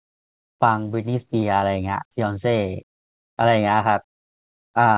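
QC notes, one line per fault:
1.40 to 1.44 s, short concealed packet loss: there's a quick smear right here where about 20 ms of audio didn't reach the decoder in time. The receiver papered over the gap by carrying the last bit of sound forward, pitch-following if it was voiced and as shaped noise if not, then eased back into the real signal. That's why you get a tiny wobble rather than a hard dropout, heard through a band that stops at 4 kHz.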